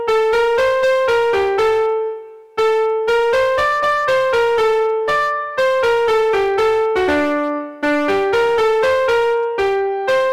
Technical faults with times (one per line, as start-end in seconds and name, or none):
0.00-10.33 hard clipping